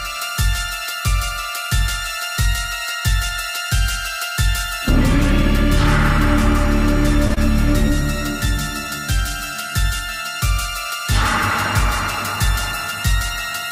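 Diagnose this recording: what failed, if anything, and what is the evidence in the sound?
Short stall from a late packet at 7.27 to 7.47 s: a late network packet emptied the jitter buffer, so the receiver held the last sound about 29 ms, then resumed without loss.

Short concealed packet loss at 7.34 to 7.38 s: roughly 20 ms never reached the decoder. The receiver extended the preceding sound across the gap, leaving a brief smear.

Jitter buffer speed-up from 11.95 to 12.93 s: to cut excess buffered delay, the receiver trimmed short pitch-period pieces, running 104% speed at unchanged pitch and shedding around 40 ms.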